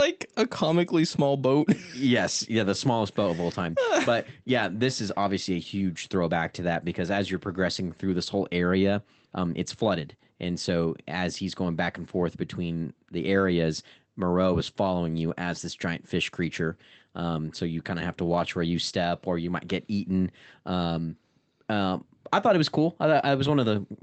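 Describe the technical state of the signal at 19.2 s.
At 19.2 s the speech is intact, with no dropout, glitch or other fault, only the normal coding character of the Opus call path.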